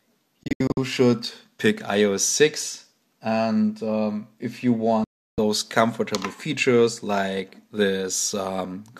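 Digital broadcast dropouts at 0.43–0.78 s and 5.04–5.38 s: the receiver mutes on failed frames, first in scattered holes (longest 72 ms), then one solid 336 ms silence.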